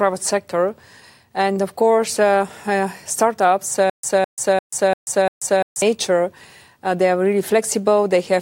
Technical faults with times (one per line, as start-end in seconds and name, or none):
3.90-5.82 stutter with silent gaps